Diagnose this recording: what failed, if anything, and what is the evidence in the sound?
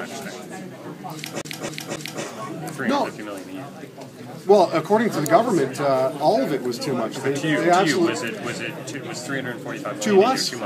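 The failure is at the playback stage, a CD stuck on one turn. From 1.41 s to 2.23 s the same 272 ms stretch of audio plays three times, with a short mute at each jump back. A scratch sends the laser back one track at the same point on every revolution, so the loop length stays fixed and the stutter is fast and even. A buffer underrun would instead leave gaps of silence or repeat an uneven block.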